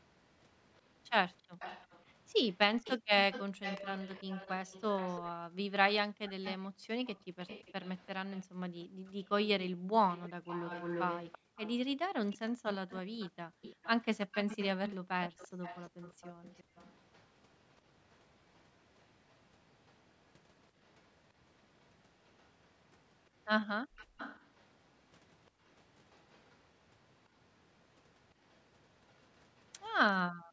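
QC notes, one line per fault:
0.00–29.83 s, echo leak: a faint copy of the speech returns 340 ms late, well below the original. It is a distinct repeat rather than room reverb, likely from a loudspeaker's echo canceller letting sound through.
2.98–3.09, 6.71–13.62 (about a second in total, in patches), 16.64–16.75, 23.85–24.17, 30.32 s to end, background gated by the echo canceller: room tone ducks by about 40, 40, 21, 35 and 40 dB while the microphone is held down, then recovers.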